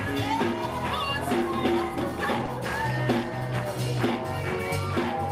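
At 2.45 to 2.49 s there is a short concealed packet loss: about 20 ms of audio failed to arrive in time, and the receiver covered the gap by extending the preceding sound before easing back into the real signal. It is heard as a brief smear or wobble. On a spectrogram the harmonics or noise pattern run on unchanged for a moment, without their usual movement, and the waveform shows a short repeated stretch that merges smoothly back in.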